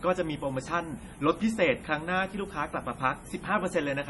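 From the very start of the speech and running right through, there's a steady, thin hiss sitting only about 20 dB below the voice, climbing hard toward the top end. That's low bit depth with noise shaping, which fits something like 8-bit audio with its rounding error pushed up in frequency.

Alongside that, the whole clip has nothing above 11.5 kHz and a heavily watery, swirly quality, with sibilants turning metallic and onsets smearing. The likely cause is MP3 compression starved of bits, consistent with an encode around 32 kbps dropping weak spectral detail frame to frame.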